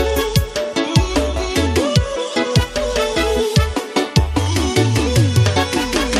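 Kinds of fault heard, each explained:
No audible faults present.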